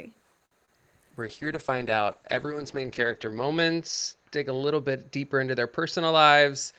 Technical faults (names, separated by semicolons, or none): short stall from a late packet; short concealed packet loss; call bitrate drop; jitter buffer speed-up